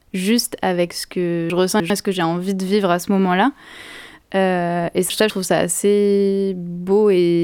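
A jumbled stretch at 1.5 to 1.9 s and again at 5.1 to 5.3 s: chunks out of order, with a 100 ms chunk playing three, then one, chunks late.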